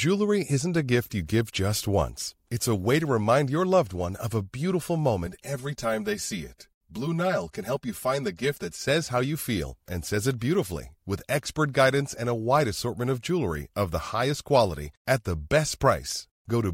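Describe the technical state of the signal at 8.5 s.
Channel delay comb filtering, 5.27 to 8.88 s: a lag of about 5 ms, summed to mono, leaves hollow, fixed notches from roughly 100 Hz, unlike a sweeping flanger.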